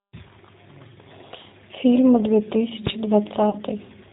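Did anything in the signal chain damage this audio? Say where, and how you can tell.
Yes. At the codec stage, the whole clip carries G.729 coding, consistent with about 8 kbit/s: speech is band-limited below 4 kHz and sounds rough and synthetic throughout.

At the sample-format stage, invalid numbers at full scale produce a single loud bang at 2.87 s. The 1.45 ms burst fits a 64-sample block pinned to one extreme value.

On the network, packet loss concealed by the speech codec appears at 3.50–3.57 s. About 30 ms is extrapolated, fitting one lost packet, and becomes stretched, fading sound, with the voice weak or distorted afterwards.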